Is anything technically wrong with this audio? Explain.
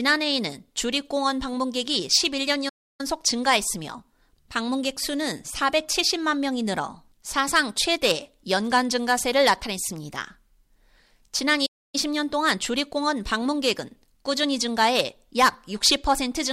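Yes. The speech cuts out abruptly twice, going completely silent for about 0.3 s from 2.69 to 3.01 s and for about 0.28 s from 11.66 to 11.95 s, then carrying on. These are playback stalls, likely caused by the player running short of buffered data or having its output thread held up, so nothing reached the output until it caught up.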